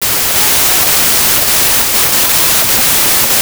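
Wrong sample width throughout this speech: packed 24-bit samples seemingly read as 32-bit bury it in loud noise, 1.33 times too fast and high-pitched.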